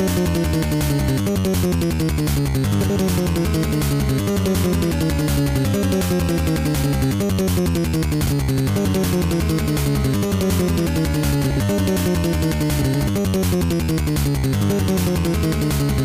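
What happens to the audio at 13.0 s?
That's frames out of order, from 12.82 to 13.08 s. Two adjacent blocks of about 128 ms each got swapped, which fits runs of four frames, so the stretch plays back-to-front in halves. You hear a garbled flutter, but no time goes missing.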